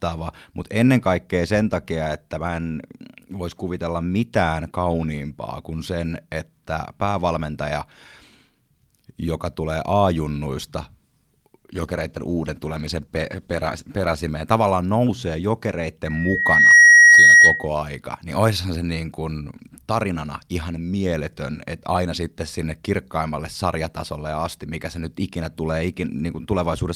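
Call bitrate drop, 11.6 to 14.25 s: the call's bandwidth estimate fell and the encoder coded the speech far more coarsely for about 2.6 s. The speech turns rough and muffled, consistent with a fall from 48 to 17 kbps, before recovering at "tavallaan nousee".

Loudspeaker feedback squeal, 16.05 to 17.68 s: the microphone picked up its own loudspeaker, and at 1.9 kHz the loop gain passed one. A single tone swells within under a second to about 15 dB above the speech, then stops before "aika niin oishan se".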